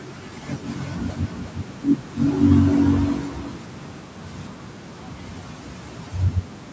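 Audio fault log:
0.64–4.00 s, doubled audio track: a dry copy trails roughly 400 ms behind, a bit quieter, starting and stopping abruptly, likely from a second, slower capture path.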